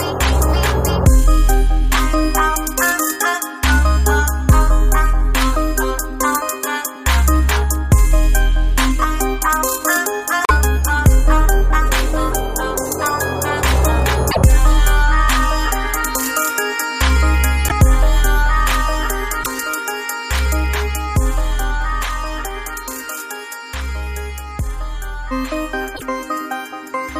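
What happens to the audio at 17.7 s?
At 17.67 to 17.72 s there's a brief glitch of about 44 ms where the audio skips ahead. That's likely a broken MP3 bit reservoir: after some missing frames (about 26 ms each here), the next frame reached back for borrowed data and found the wrong bytes.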